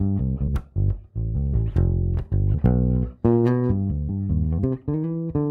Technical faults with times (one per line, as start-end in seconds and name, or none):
0.47 damaged data in a compressed stream
2.53 damaged data in a compressed stream
4.58 damaged data in a compressed stream